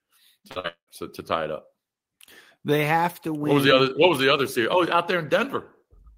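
Speech that turns choppy and robotic from 0.39 to 0.90 s, with four holes up to 195 ms: repeated packet loss, each gap patched by extending the preceding sound.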